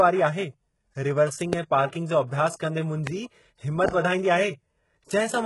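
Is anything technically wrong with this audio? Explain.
Yes, there are a few problems.

Throughout, the treble is rebuilt and sounds gritty and lispy, with heavy codec damage and nothing above 11.5 kHz. That's likely HE-AAC compression at a very low bitrate, around 12 kbps, with the top copied up from lower bands.

There's a loud pop at 1.53 to 1.55 s, again at 3.07 to 3.09 s right after "जो अभ्यासु कंदे", and at 3.88 to 3.91 s. Each is a single sharp hit about 15 dB above the speech, likely a voltage spike from a plug, switch or driver glitch.

There's pre-echo from 1.89 to 1.93 s, between "रिवर्सिंग ऐं" and "जो अभ्यासु कंदे". Codec noise smears 36 ms ahead of an attack, so a short hiss comes before it and the onset sounds soft.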